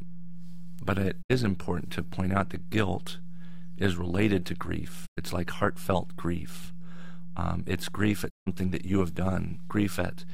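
From start to end the speech carries a DC offset. The waveform sits displaced from the zero line by a constant amount. It is inaudible in itself but eats headroom, and a spectrogram shows it as a steady band of energy hugging 0 Hz.

Also throughout is overlap-add ripple. Windowed frames were rejoined with overlaps that don't sum to unity gain, so the level pulses by about 6 dB at around 150 Hz. This is heard as a metallic buzz with extra tones around each note, and the waveform envelope shows regular scalloping.

Digital broadcast dropouts occur at 1.21–1.32 s, 5.05–5.19 s and 8.28–8.48 s. Each time, the receiver muted on failed frames, fading to silence over 20 ms. The gaps lose about 64, 96 and 160 ms of programme, fitting two, three and five frames, and show as blank vertical stripes.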